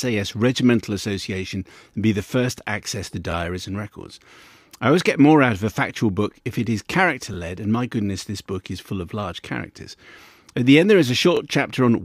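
At 3.32–3.34 s, 7.34–7.37 s and 11.37–11.39 s, overlapping chunks cause a brief stutter: each 4-second block restarts 25 ms early, replaying that sliver. Unlike a dropout, nothing goes missing. The same sound doubles, evenly spaced.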